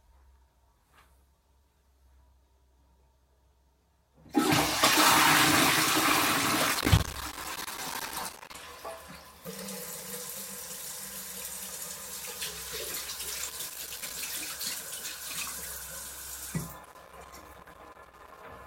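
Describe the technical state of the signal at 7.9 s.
Loose connector crackle runs from about 6.75 s to 8.55 s, so 7.9 s falls inside it. A worn or dirty contact is rapidly making and breaking, chopping the signal and adding pops from any DC present, heard as irregular bursts of scratchy crackle over the sound.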